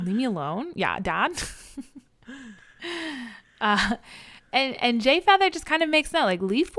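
Listening to the speech here, nothing stood out as a technical problem at any point.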